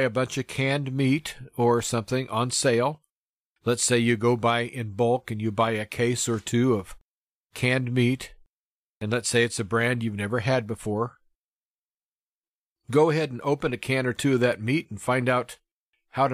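No technical faults can be heard anywhere in the speech recording. Nothing here calls for a timestamp or a closer look.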